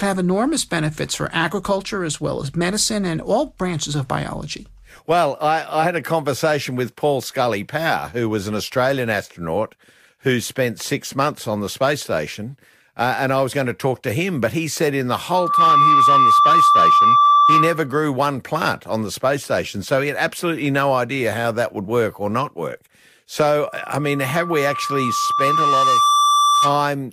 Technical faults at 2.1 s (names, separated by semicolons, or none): none